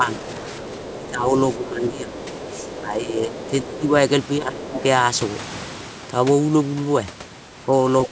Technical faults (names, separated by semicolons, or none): speech suppressed in double talk; other side's voice leaking through